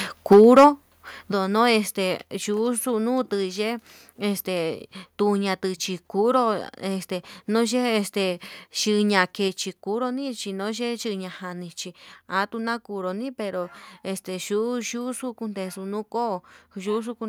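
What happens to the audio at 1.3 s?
At 1.32 s the microphone volume is stepped down, likely because the call software judged the input too loud or close to clipping and cut the device's input gain in a single move. The change is abrupt rather than a fade: the speech and the background behind it both fall by about 9 dB at once, so the level seems to shift down a notch and stays at that lower setting.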